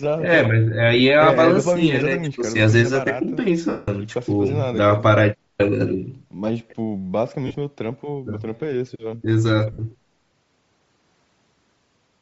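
Throughout the speech there is a breathy, grainy edge on the upper frequencies, with the top of the spectrum sounding partly replaced by hiss. This is plainly audible codec damage, likely from Bluetooth LC3 compression. At a low bitrate the transform codec drops much of the high band and fills it with noise. The damage is consistent with LC3 at around 32 kbps using short 7.5 ms frames.

From 3.69 to 3.88 s, lost LE Audio frames interrupt the speech for about 188 ms. The decoder keeps repeating the last spectrum with randomised signs. This turns the sound into a noisy smear that fades out across the gap. At 7.47 to 7.55 s the losses are scattered over 75 ms and total 67.5 ms, with the longest continuous run about 40 ms. The result is a brief, broken roughness. At 9.72 to 9.79 s a 60 ms loss produces a short, hissy blur in place of the speech.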